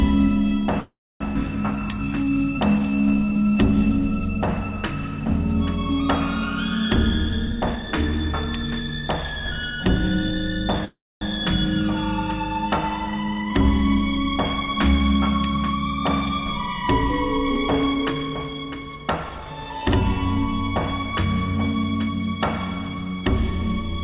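At 0.8 s the audio hangs for about 0.4 s, until 1.22 s. The last bit of sound carries on as a fading buzz, then drops to near-silence for roughly 270 ms before the audio picks up where it left off. That's a call audio freeze, likely from packets stalling in transit until the jitter buffer ran dry. Nothing is lost, but everything after it now runs about 404 ms late.

Right after that, at 1.34 to 1.37 s, there's a skip ahead. Playback jumps forward, joining the two sides almost directly with only a few milliseconds of fill. Around 300 ms of audio is simply gone, which cancels most of the delay the freeze just added.

From 1.76 to 3.52 s comes a jitter buffer slow-down. The buffer was running low or had just raised its target delay, so the receiver kept repeating single pitch periods to rebuild its reserve. Pitch stays put, but that stretch plays at about 85% speed, with roughly 281 ms added, so sounds feel drawn out.

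Then, from 6.90 to 9.78 s, there's a jitter buffer speed-up. The buffer was holding more than it wanted, so the receiver repeatedly trimmed out short pieces of a pitch period or so. Playback runs at about 114% speed with around 400 ms removed. Pitch is unchanged, but the audio sounds hurried.

At 10.85 s a second call audio freeze hits, lasting to 11.23 s. It sounds like the first: a trailing buzz that dies to about 250 ms of near-silence, then a clean resume, with nothing missing and the timeline pushed back about 366 ms.

Finally, from 17.13 to 19.54 s, another jitter buffer speed-up runs at about 114%, again cutting roughly 400 ms and leaving that stretch sounding rushed.

Throughout, the band stops at 4 kHz, which fits a G.711 mu-law call path at 64 kbps.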